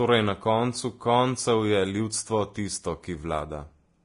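Speech with heavy codec damage throughout: nothing above 10.6 kHz, grainy hiss replacing treble detail, and smeared consonants, likely from Vorbis compression at a low bitrate near 30 kbps.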